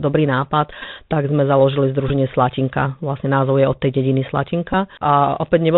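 Throughout, the speech passes through the Bluetooth CVSD headset codec, a one-bit delta coder running at 64 kHz whose adaptive step cannot keep up with loud high-frequency movement. Nothing above 4 kHz survives, s sounds come out scratchy, and a grainy hiss sits plainly audible under the speech.

A Bluetooth headset packet repeat occurs from 0.82 to 0.85 s, at 2.09 s just after "sme založili", and at 4.73 s just after "je od tej dediny". Lost packets were filled by decoding the previous packet's bits again. Repetition every 3.75 ms yields a brief buzz near 267 Hz lasting 11.2, 15.0 and 7.5 ms respectively.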